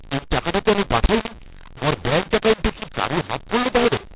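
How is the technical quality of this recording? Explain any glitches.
The technical quality is poor, because of one fault that runs through the whole clip. The telephone-band coding itself, 8 kHz G.711, sounds as expected, with nothing above 4 kHz.

The fault is a mu-law and A-law mix-up. The speech was coded with A-law but decoded as mu-law. The two logarithmic scales map the 8-bit codes to different levels. So each sample lands at the wrong amplitude. Some come out too loud, others too soft. The quietest samples rise well above silence. The speech sounds harsh and gritty, and the gaps between phrases fill with hiss.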